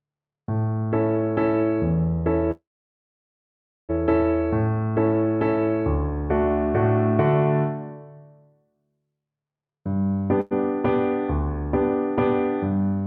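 At 2.51 s the sound stops moving forward: the last moment is stretched into a brief fading buzz, then about 1.26 s of silence until 3.91 s. A shorter hold follows from 10.41 to 10.53 s, a 0.1 s smeared continuation that never reaches silence. These are call audio freezes, likely caused by packets stalling in transit and the jitter buffer running dry. Playback resumes where it stopped, so nothing is lost, but each gap pushes everything after it later.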